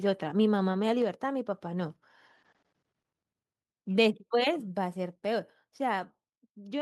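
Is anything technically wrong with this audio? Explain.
Yes. At 1.02 s and 4.23 s the speech and background drop together in one step, by about 3 dB and then about 4 dB. This is a microphone volume stepped down, likely the call software cutting the input gain after judging the level too hot.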